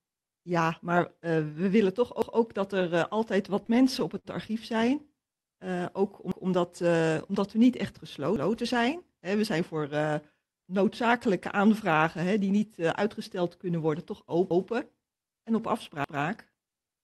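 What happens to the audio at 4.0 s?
Packets reached the receiver late or more slowly than they were played, so the jitter buffer ran dry four times between 3.66 and 4.27 s, just after "dat er altijd wat". Each time, the receiver stretched the last sound to cover the wait, about 0.1 s in total, with the longest gap around 55 ms. Nothing is lost, but the speech drags and stutters in small hitches, a repeated stall (stutter) around 4.0 s.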